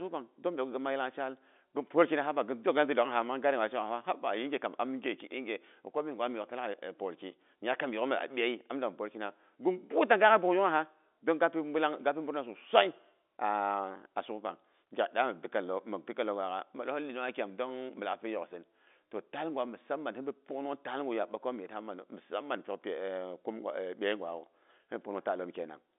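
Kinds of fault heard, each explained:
The speech is carried over G.711 mu-law telephone coding at 64 kbps, so its band runs from 250 Hz to 3.6 kHz with nothing above 3.8 kHz, and no fault is heard in it.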